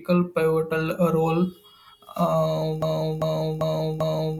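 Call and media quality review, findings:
Broken-record loop, 2.82 s to end of clip. Likely playback or stream buffer stall, with the last held fragment resent instead of new data. Symptom: one 394 ms segment of speech repeats back to back, four times, with identical content each pass, running to 4.39 s. Speech that should follow 2.82 s never arrives.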